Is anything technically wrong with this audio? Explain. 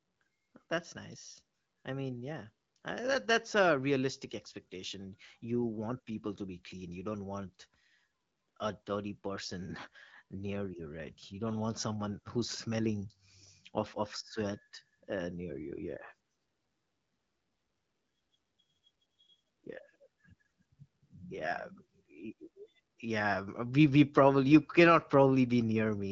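No, nothing here sounds technically wrong.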